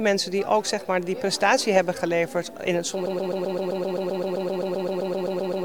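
At 3.06 s the audio locks into a broken-record loop: a 130 ms fragment repeats exactly, back to back, about 20 times until the end. This stutter most likely comes from a stalled player or stream resending its last buffered piece, so the intended audio is lost.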